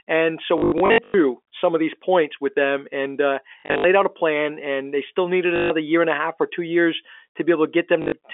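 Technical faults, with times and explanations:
0.58–1.14 s, 3.6–3.84 s, 5.56–5.7 s, 8.02–8.12 s, packet loss with last packet repeated: gaps before "some of these points", "out a plan" and "year and a half" were filled by replaying the previous packet, so runs buzz at 50 Hz, which fits 20 ms packets.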